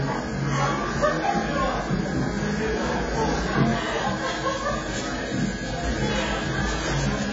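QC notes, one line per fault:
Throughout, AAC compression: the sound is dull and smeared, with nothing above about 7.6 kHz and a warbling, fizzy texture where energy is sustained. The likely cause is heavy AAC-LC coding at a bitrate that fits roughly 16 kbps, with too few bits to carry the upper spectrum or fine detail. A plain low-pass filter would cut the top just as cleanly, but it would leave what remains stable rather than swirling and watery.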